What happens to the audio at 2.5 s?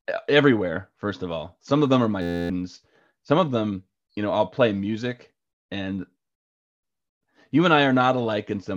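A steady, mechanical buzz at about 86 Hz replaces the speech from 2.22 to 2.50 s, right after "of them are my". It is a system hang loop: the computer or driver stalled while the sound hardware kept replaying the same 11.6 ms slice of its ring buffer, about two dozen times, which fits a 512-sample buffer. Because the looped piece is so short, the repeats fuse into a tone rather than a stutter, and roughly a third of a second of real audio is lost.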